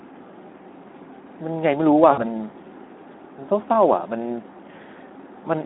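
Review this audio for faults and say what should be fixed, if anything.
The whole clip carries Speex codec damage: the speech sounds hoarse and grainy because there are too few bits for the excitation, which fits a rate around 11 kbps, and the line is band-limited to roughly 250 Hz to 3.5 kHz. To prevent it, run Speex at a higher quality setting or switch to a modern wideband codec.

From 2.11 to 2.20 s there's VoIP packet loss concealed by the speech codec. About 60 ms went missing, which fits three 20 ms frames. The decoder stretches the last pitch and filter into a fading buzzy tone or coloured noise, and the sound stays weak for a moment afterwards. To prevent it, add a jitter buffer with forward error correction or redundancy on the network path.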